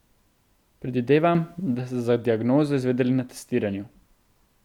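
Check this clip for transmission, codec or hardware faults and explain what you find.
One fault is present in this speech clip: a sudden gain jump. From 1.35 s to 1.75 s, just before "da ste za diagnozo", the level steps up by about 6 dB with no ramp, speech and background noise rising together, then falling back. This is likely a digital gain setting or bit shift applied from one sample to the next.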